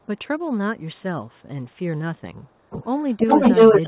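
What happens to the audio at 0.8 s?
A faint, delayed copy of the speech surfaces from 0.78 to 1.03 s. It trails the original by 344 ms and sits very low beneath it. This is likely an echo leak: loudspeaker sound reached the far-end microphone, slipped past echo cancellation, and came back.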